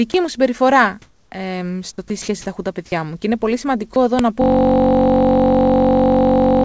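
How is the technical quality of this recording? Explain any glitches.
The recording has several serious glitches, the worst being a long frozen loop near the end. The speech is band-limited with nothing above 8 kHz, which fits a wideband call codec.

Sound dropped by the voice detector at 0.12, 2.08, 2.22 (just before "τα έχουν τα παιδιά") and 3.94 s: brief gaps of 20 to 60 ms where speech gives way to steady noise, likely because the detector misjudged quiet speech as background.

Comfort noise in place of the background from 1.02 to 1.32 s, after "μου συμπεριφορά": the real background is likely swapped for synthetic noise during a pause, sounding flatter and about 2 dB different.

Uninitialised buffer at 4.19 s: a tiny block of leftover memory, under a millisecond, played as samples, heard as a loud crack.

System hang loop from 4.42 to 6.64 s, after "εδώ να": a 21.33 ms piece repeats 104 times at 46.9 Hz, producing a steady buzz. 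This fits a 1024-sample ring buffer, and roughly two seconds of audio are lost.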